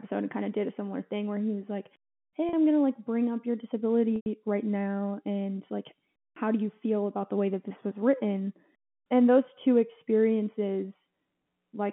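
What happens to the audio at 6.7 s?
Nothing goes wrong at 6.7 s: the speech carries on intact through that moment, with only the narrow telephone band of the G.711 line audible.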